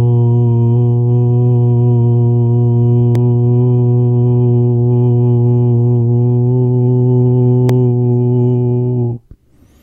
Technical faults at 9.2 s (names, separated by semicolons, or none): none